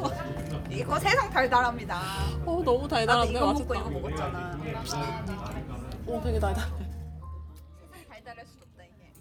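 There are no technical faults to describe at any point in this recording of everyday sounds.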